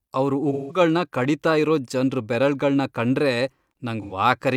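Between 0.52 and 0.80 s, and again from 4.02 to 4.13 s, there is AAC frame loss with concealment. Coded frames went missing and the decoder patched each gap by reusing the last good spectrum. The first dropout is about 171 ms, which fits four lost frames, and the second is about 85 ms, which fits two. Each patch comes through as a brief smeared, noisy, phasey stretch in place of the speech.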